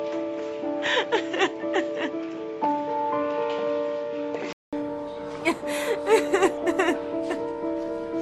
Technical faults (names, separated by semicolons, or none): input switched to a poorer device